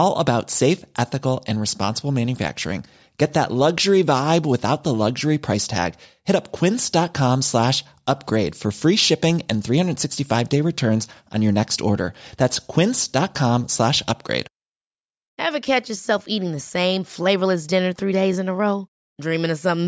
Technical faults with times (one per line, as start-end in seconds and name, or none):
none